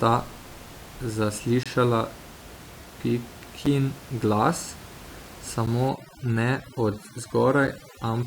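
At 1.63 s, and again at 3.66, 5.66 and 7.67 s, the time stamps of consecutive stream segments fail to meet. That leaves a gap between stream segments, which the player fills with silence. The sound drops out with hard edges: about 23 ms at 1.63 s, and shorter holes of roughly 7 to 10 ms at the later points. The even 2-second spacing fits segment boundaries, and the speech simply resumes with nothing lost.

From 5.89 s to the end, a noise reduction stage set far too aggressively starts cutting frequency bands that sit close to its noise estimate. Quiet parts of the speech are removed along with them. This overdone noise removal makes the background room noise, about 19 dB below the speech, drop and break up into twinkling specks. The final segment gap at 7.67 s falls within this stretch.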